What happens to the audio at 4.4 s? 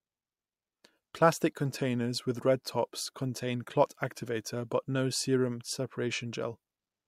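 At 4.4 s the speech carries faint clock slip clicks, part of a regular ticking from 0.28 s to 7.06 s, roughly five per second. Two unsynchronised clocks, likely about 100 ppm apart, force a single sample to be dropped or repeated. A spectrogram shows evenly spaced thin vertical lines, and the waveform shows tiny steps.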